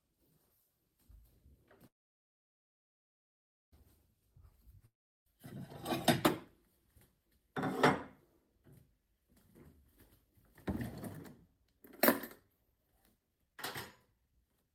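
A recording of everyday sounds with three kinds of trouble. At 1.87 s there's a call audio freeze: the last bit of sound gets stretched into a brief fading buzz, then nearly 1.83 s of silence until 3.73 s, after which the audio picks up exactly where it stopped. Nothing is lost, but the whole thing now runs about 1.85 s late, which is likely packets stalling in transit and the jitter buffer running dry. Then from 4.86 s to 5.27 s there's a long network dropout: another short fading tail, about 0.36 s of silence, and when the audio returns about 0.73 s of it is simply gone, so it jumps ahead and the lag shrinks by roughly a third of a second. Probably a stretch of packets that never arrived at all. After that comes jitter buffer speed-up, where the receiver keeps snipping out tiny pitch-period-sized chunks to drain a backlog, so things play faster without changing pitch. It's mild from 6.42 s to 7.39 s at 104% speed (around 40 ms trimmed), stronger from 9.80 s to 10.34 s at 113% (around 70 ms), and really obvious from 11.48 s to 14.73 s at 123%. 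That last stretch loses something like 0.7 s and sounds noticeably hurried.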